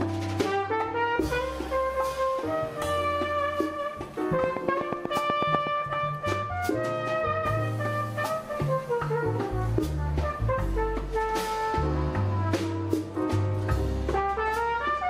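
From 4.44 s to 5.68 s a train of clicks runs over the audio: about ten sharp, near-identical pulses at a steady 8.1 per second, peaking about 15 dB above the surrounding signal. They register as an even ticking that sits on top of the material rather than within it. The regular spacing and uniform shape point to a likely cause outside the recorded sound, such as interference from nearby equipment or a faulty connection or power supply.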